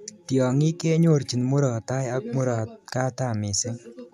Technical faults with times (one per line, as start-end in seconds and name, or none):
none